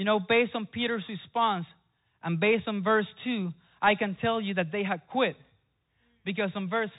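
A speech recording passed through a Bluetooth CVSD headset codec for its whole length. CVSD encodes each sample as a single up-or-down bit with an adapting step, which fits a 64 kbps link. On a spectrogram everything stops at about 3.8 kHz, with nothing above. Loud, bright passages outrun the step size and turn gritty, s sounds come out scratchy, and a granular hiss sits under the speech, visible as a raised, speckled floor between phrases in the waveform.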